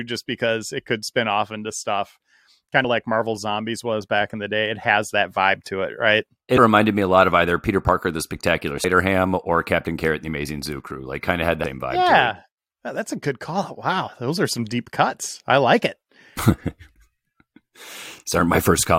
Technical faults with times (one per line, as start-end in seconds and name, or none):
2.84 damaged data in a compressed stream
6.57 damaged data in a compressed stream
8.83 damaged data in a compressed stream
11.63 damaged data in a compressed stream